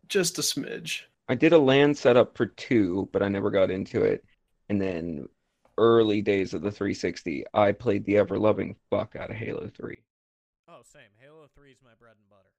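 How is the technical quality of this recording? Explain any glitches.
The recording holds up until about 9.95 s, where the speech suddenly drops by about 27 dB and stays faint through to the end at 12.58 s. That's most likely one channel inverted: with one side's polarity flipped, the shared centre content cancels in a mono sum, leaving only a weak difference signal.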